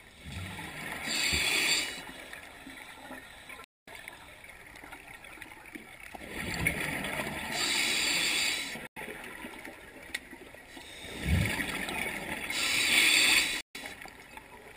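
Silent gaps cut in at 3.64, 8.87 and 13.61 s, lasting about 0.23, 0.09 and 0.14 s. Sound resumes further along. A likely Bluetooth dropout.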